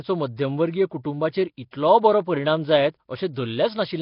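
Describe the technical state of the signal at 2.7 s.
At 2.7 s the speech carries heavy Nellymoser compression, present throughout the clip. It is likely from Flash's Asao codec at a rate near 22 kbps. Starved bands are noise-filled, giving a hissy, smeared, underwater sound. On a spectrogram, energy stops sharply at 5.3 kHz, with blotchy, noisy bands below.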